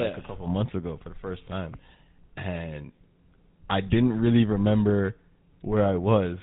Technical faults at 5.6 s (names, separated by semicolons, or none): GSM full-rate codec